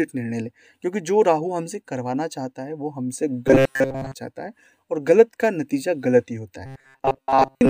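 From 3.48 to 4.15 s, and again from 6.66 s to the end at 7.70 s, the sound turns into robotic sound from repeated short buffers. A rigid metallic buzz sits at 134 Hz. That fits a 7.5 ms fragment likely being looped while most new audio is skipped.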